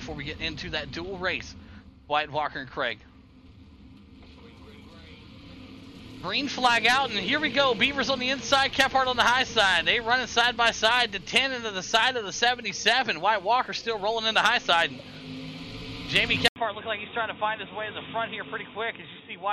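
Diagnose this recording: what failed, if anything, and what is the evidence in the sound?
At 16.48 s the sound drops out for about 80 ms, then returns dull and boxy through to the end, with nothing above 3.7 kHz, a level a few decibels lower, and a new background noise sitting roughly 40 dB under the signal. This points to the driver stage: the input likely switched to a poorer device, such as a headset in its narrowband call profile, bringing its own bandwidth limit, gain and noise floor.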